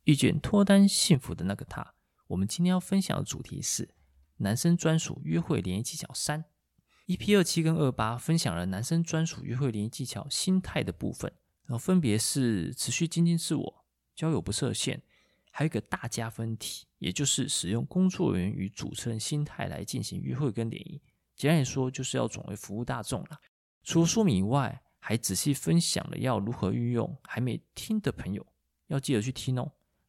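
A digital gain stage most likely changed its setting from one sample to the next, with no ramp to ease the transition, at 1.15 s. That sudden gain jump drops the whole signal by about 6 dB and it stays down until the end of the clip. The speech and the background noise fall together in a single step, so the level change sounds abrupt, as if a fader had been snapped down.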